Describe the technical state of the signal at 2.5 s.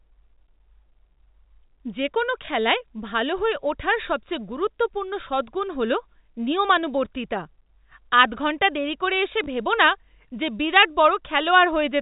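A small blip sits at 2.46 to 2.48 s, a packet loss with the last packet repeated. About 20 ms of audio went missing, which fits a single dropped 20 ms packet, and the receiver replayed the previous packet in its place. That repeat seldom lines up with the pitch.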